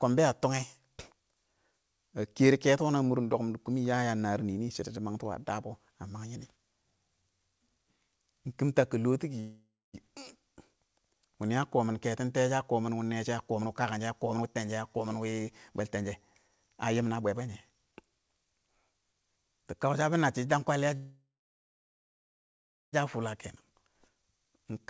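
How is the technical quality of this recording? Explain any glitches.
The recording has two kinds of glitch: two call audio freezes and three jitter buffer speed-ups. It is band-limited with nothing above 8 kHz, which fits a wideband call codec such as G.722.

Call audio freeze, 9.40–9.96 s and 20.97–22.95 s: the sound stalls into a fading buzz or hiss and then goes silent, for about 0.25 s in the first freeze and 1.68 s in the second. Packets were likely held up in transit so the jitter buffer ran dry. Speech resumes where it stopped, with nothing lost but extra delay added.

Jitter buffer speed-up, 13.55–16.05 s (115%), 16.48–17.93 s (111%) and 23.70–24.87 s (108%): the speech sounds hurried at unchanged pitch. The receiver trimmed repeated pitch-period slices to shed excess buffered audio, removing roughly 0.4 s, 0.15 s and 0.1 s respectively.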